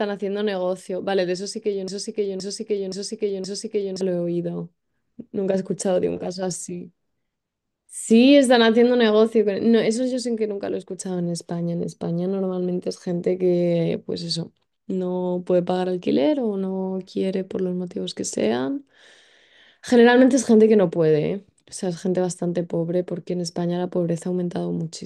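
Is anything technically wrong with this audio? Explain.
Yes. From 1.88 to 4.01 s the speech falls into a broken-record loop: a 0.52 s fragment repeats exactly, four times back to back, likely because playback stalled and resent its last buffer. The repeats are identical and abutting, unlike decaying echo, and the original audio is lost.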